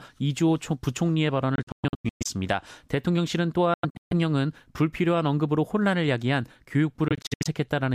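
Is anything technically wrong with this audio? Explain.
Yes. The speech has three bursts of likely Bluetooth dropout, at 1.56–2.26 s, 3.74–4.13 s and 7.08–7.47 s. Packets arriving too late are discarded, leaving clusters of silences (longest 116, 139 and 70 ms). The sound resumes further along, as if it had kept playing.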